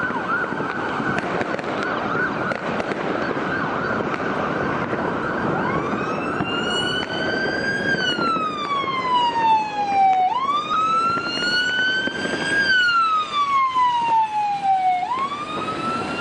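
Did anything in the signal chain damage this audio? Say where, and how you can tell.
Yes. At 10.73 to 10.76 s there is a brief blip, a short chirpy burst lasting about 25 ms that doesn't belong to the surrounding sound. This is a corrupt frame decoded at the codec stage. Flipped bits in a couple of compressed frames gave the decoder wrong gain values or misread codes, and it played them anyway. For the length of those damaged frames, that put energy at the wrong frequencies.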